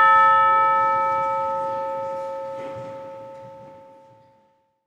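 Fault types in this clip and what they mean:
No technical faults can be heard in this recording of sounds; the signal stays continuous and stable, with no dropouts, distortion or added noise.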